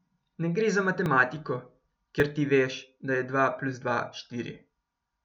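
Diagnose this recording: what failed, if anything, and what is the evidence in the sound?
Jumps at 1.06 s and 2.20 s, skipping about 10 ms of speech: likely a dropped buffer (overrun), the driver missing samples before hardware overwrote them.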